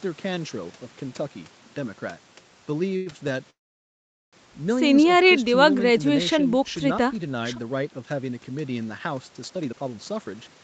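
From 2.93 to 3.30 s the speech breaks into repeated stalls (stutter). Packets arrived late, and the jitter buffer ran dry four times. Each time the receiver stretched the last sound to fill the gap. The longest fill is 96 ms, and about a third of that span is concealed. Nothing is lost, but the speech drags and catches.

At 3.50 s the audio freezes for about 0.83 s, until 4.35 s. A brief continuation of the last sound fades into roughly 800 ms of silence. Then the speech resumes where it stopped. This is a call audio freeze, likely from packets held up in transit. Nothing is skipped. The pause is inserted, adding about 825 ms of delay.

From 9.54 s to the end, a jitter buffer speed-up takes over. The buffer was holding too much audio, so the receiver cut many short pitch-period slices to catch up. Roughly 0.4 s is removed. The speech runs at about 132% speed with unchanged pitch, and it sounds hurried.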